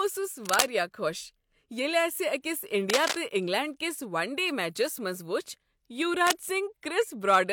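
Brief bursts of dense scratching and rustling, roughly as loud as the speech, break in at 0.43 to 0.66 s, 2.90 to 3.17 s and 6.27 to 6.43 s. This is cable scratch noise, likely from a worn cable or connector whose contact resistance fluctuates as it moves.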